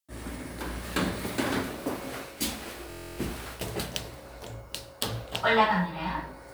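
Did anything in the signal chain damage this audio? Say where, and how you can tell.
Yes. From 2.90 to 3.18 s, a system hang loop at the driver/buffer stage repeats one 23.2 ms slice twelve times, buzzing at 43.1 Hz, which fits a stalled 1024-sample ring buffer.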